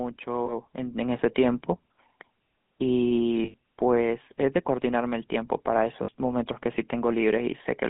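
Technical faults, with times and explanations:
Throughout: GSM full-rate codec. The sound is confined to roughly 150 Hz to 3.5 kHz. It has a buzzy, gravelly roughness, which fits 13 kbps full-rate coding. That codec models the vocal tract and drives it with sparse, regularly spaced excitation pulses.
0.24 to 1.41 s: automatic gain rising. The level swells by about 5 dB over more than a second. Speech and background grow together. A gain control judged the input too quiet and raised its gain step by step.
0.46 to 0.54 s, 3.44 to 3.54 s, 6.04 to 6.10 s: lost GSM frames. The sound freezes into a rough, metallic ring lasting 20, 100 and 40 ms. The decoder repeated the last good frame's settings in place of the lost frames.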